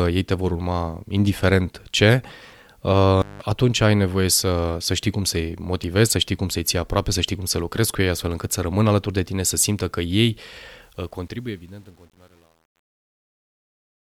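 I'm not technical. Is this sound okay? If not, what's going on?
No. There are two problems.

The first is an intermittent contact at 3.21 to 3.42 seconds. It sounds like a loose cable or plug briefly losing its connection. The sound drops out for under a fifth of a second. There is a crackle as it cuts out and again as it comes back, with faint hiss in between. Speech resumes right after, with "atunci ai nevoie să".

The second is truncation distortion on a fade. It starts at 10.82 seconds and runs to the very end, and it is worst from about 11.22 seconds on. The ending fades out from around 11 seconds to 14.1 seconds. But the volume step that makes that fade keeps too little detail, which fits a stage working with only about 9 bits. As the sound gets quieter, it turns gritty and grainy.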